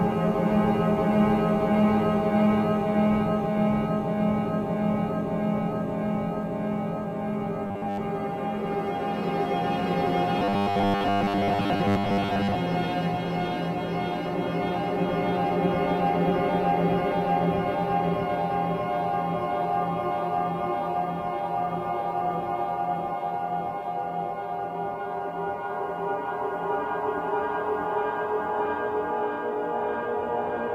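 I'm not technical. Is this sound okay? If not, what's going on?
No, it isn't quite right. From 7.67 to 8.01 s, and again from 10.39 to 12.55 s, the sound turns harsh and mechanical, with a steady metallic buzz at about 100 Hz. This is robotic sound from repeated short buffers. The likely cause is new audio arriving too slowly, so the playback keeps replaying the last tiny slice, about 10 ms long, and skips most of the real sound in those stretches.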